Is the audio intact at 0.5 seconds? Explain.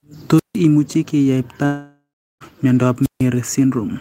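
No. At 0.5 seconds the speech sits inside a wireless microphone squelch dropout running from 0.36 to 0.57 s. The radio signal from the microphone faded until the receiver's squelch cut the output, so a brief rush of hiss gives way to a mute of about 157 ms before the voice comes back. A waveform shows a flat, near-empty gap. A spectrogram shows broadband noise, then a dark hole across all frequencies.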